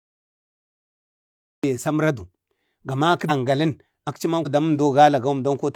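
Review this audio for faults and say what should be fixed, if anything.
Cut-off start, 0 to 1.64 s: the speech opens with digital silence and then enters abruptly mid-sound at 1.64 s, with no attack or fade. Capture began after the talker had already started, so the onset was lost. To prevent it, start recording before speech begins or keep a pre-roll buffer.

Compressed frames skipped, at 3.25 to 3.31 s just after "saməradu ga maki", and again at 4.42 to 4.47 s: each time the speech jumps forward by about 100 ms. Whole encoded frames were dropped, either missing from the stream or rejected as corrupt. To prevent it, protect the encoded stream with error checking or retransmission so damaged or lost frames are recovered before decoding.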